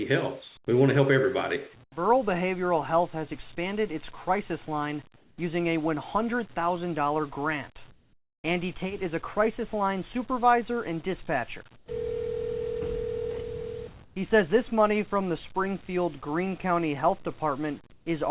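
Comfort noise in place of the background appears at 1.84, 5.16, 7.92, 11.76, 14.04 and 17.92 s. In each pause the natural background gives way to a steady, featureless hiss for 80 to 520 ms, lasting longest at 7.92 to 8.44 s. It sits between about 7 and 19 dB quieter than the real background. The likely cause is the sender's voice detection halting transmission and the receiver synthesizing noise, heard through a call path with nothing above 4 kHz.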